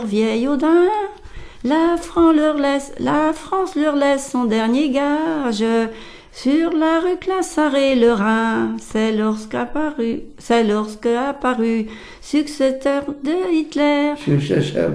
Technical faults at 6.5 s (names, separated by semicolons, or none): none